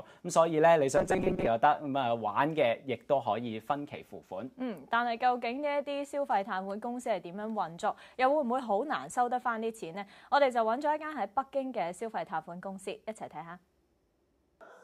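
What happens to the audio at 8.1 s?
Nothing goes wrong at 8.1 s; the audio plays through that moment intact, with no dropout, click, glitch or other fault.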